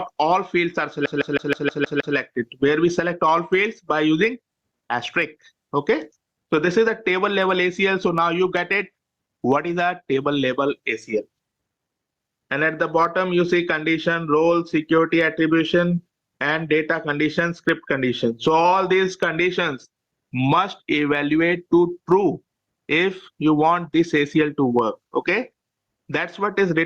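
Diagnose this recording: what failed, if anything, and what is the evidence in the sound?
Gain pumping runs through the whole recording: the gain swings by around 15 dB under loud sounds, leaving the dynamics squashed. The cause is likely input gain set far too high with a fast limiter clamping it. Unlike a noise gate, the background rises rather than cutting out.

A CD stuck on one turn hits at the playback stage from 1.06 to 2.16 s. The same 0.16 s slice repeats seven times, each jump marked by a brief mute, as a scratch throws the laser back one track. The evenly spaced, identical repeats distinguish it from a buffer underrun.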